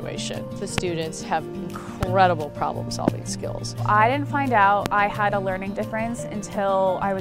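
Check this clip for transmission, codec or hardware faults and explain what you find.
There's one problem: four loud pops at 0.78–0.80 s, 2.03–2.05 s, 3.08–3.10 s and 4.86–4.88 s. Each is a single sharp click about 20 dB over the sound (the second a bit softer), most likely from a voltage spike from a plug, switch or static. The sound continues underneath each one.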